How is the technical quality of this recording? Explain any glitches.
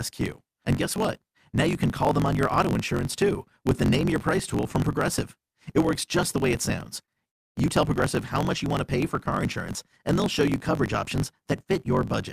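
The technical quality is poor. A steady fault runs through the whole recording, and two interruptions in the speech follow close together just after 7 seconds.

Throughout, there is a block size mismatch (truncated). One stage writes longer blocks than the next stage reads, so the tail of every block is discarded. You hear a low buzz at about 46.9 Hz, which fits a 1024-sample read block. The speech also plays about 1.12 times too fast while keeping roughly its normal pitch. A spectrogram would show evenly spaced vertical seams at that rate. The waveform would show a small discontinuity at each block boundary.

At 7.05 to 7.11 s, right after "the way it sounds", there is a short stall from a late packet. A packet missed its playout time, so the jitter buffer emptied. The receiver stretched the last sound for about 28 ms until the packet arrived, then resumed where it left off, so nothing is lost. 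It is heard as a briefly held sound with a faint buzz. The spectrogram shows a short smear of repeated texture, and the waveform shows a slight dip.

From 7.29 to 7.58 s, also just after "the way it sounds", there is a call audio freeze. The likely cause is packets being held up in transit until the jitter buffer ran dry. The receiver carried the last sound forward as a fading buzz, and about 290 ms of the gap is silence. The speech then picks up where it stopped, about 296 ms late, with nothing missing. The spectrogram shows a brief decaying streak followed by an empty band. The waveform goes flat.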